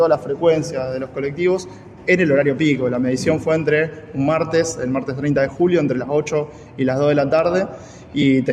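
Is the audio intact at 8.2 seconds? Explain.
No. At 8.22 s there is a brief gap of about 15 ms, heard as a short noisy smear. This is lost LE Audio frames: the LC3 decoder filled the gap by repeating the last spectrum with random signs, consistent with two lost frames.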